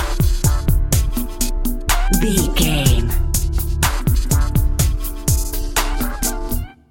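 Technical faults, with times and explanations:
No technical faults are audible at any point in the clip.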